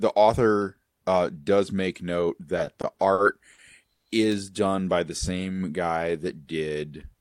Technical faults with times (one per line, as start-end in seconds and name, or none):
2.56-4.04 repeated stalls (stutter)
4.32 electrical switching spike
4.69-4.95 jitter buffer slow-down